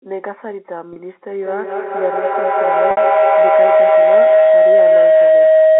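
A speech recording over a telephone-band line, with two faults. Packet loss with pitch repetition occurs at 0.93 s for 30 ms and at 2.91 s for 60 ms. At 0.93 s, the last pitch period is looped to cover the gap, so the voice briefly holds on a slightly buzzy tone instead of dropping to silence as a plain dropout would; at 2.91 s the repeat fades into silence before the speech returns with a short cross-fade. The longer gap fits two lost packets rather than one. From 1.32 s to the end, a feedback howl builds as two devices in the same room on the call re-amplify each other. It settles near 700 Hz, with a loop delay of roughly a fifth of a second, and peaks about 12 dB above the speech. Unlike steady mains hum, it grows and narrows in pitch and never stops. The line band itself runs 250 Hz to 3.5 kHz, as expected for G.711 coding.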